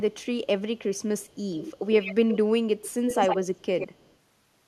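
Echo leak at 0.13, 0.97, 1.19, 1.54, 2.01, 2.8 and 3.54 s: a distinct delayed copy of the speech, 149 ms late and faint at first, then 103 ms and nearly as loud by 2.8 s. It is likely a loudspeaker echo the far end's canceller missed. It is a discrete repeat, not smeared room reverberation.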